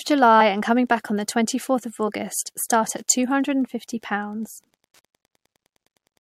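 Speech runs throughout over Wi-Fi interference: a faint, steady ticking about ten times a second, well below the voice, set by a nearby radio's beacon every 102.4 ms and rectified by the audio circuit. Mobile-phone interference differs by buzzing continuously near 217 Hz rather than ticking.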